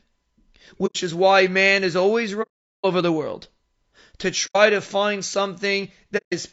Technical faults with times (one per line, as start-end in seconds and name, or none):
0.00-6.53 low-delay AAC compression
0.86-0.96 AAC frame loss with muting
2.42-2.85 AAC frame loss with muting
4.46-4.56 AAC frame loss with muting
6.17-6.33 AAC frame loss with muting